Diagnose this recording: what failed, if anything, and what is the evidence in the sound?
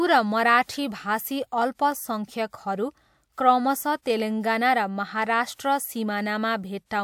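The codec stage failed: pre-echo appears at 5.54 to 5.59 s, where a short hiss runs about 47 ms ahead of a sharp speech onset and the attack sounds smeared. Quantisation noise sized for the loud onset spread back across the quiet start of its transform block.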